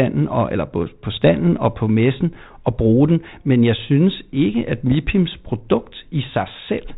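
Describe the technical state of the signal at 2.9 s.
At 2.9 s the speech is intact, with nothing beyond the light, level-following graininess and 4 kHz band limit of the G.726 ADPCM coding at 32 kbit/s that carries it.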